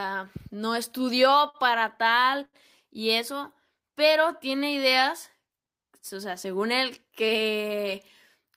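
Speech, with two network-delay faults. From 0.85 to 1.57 s there are repeated stalls (stutter): the audio hitches five times as packets arrive too late or too slowly to keep the jitter buffer fed. Each time it runs dry, the receiver carries the last bit of sound forward until data turns up again. That adds up to 87 ms of filler, about 12% of that stretch, with the longest hold at 48 ms. Nothing actually drops out, but the passage drags and stammers. Then at 2.45 to 2.56 s there's a short stall from a late packet. The delay jumps by 78 ms, so one packet misses its slot and the buffer empties. The receiver stretches the current sound for those 78 ms and picks up exactly where it left off. Nothing is lost, but that moment hangs on too long, with a faint buzzy or dipped quality.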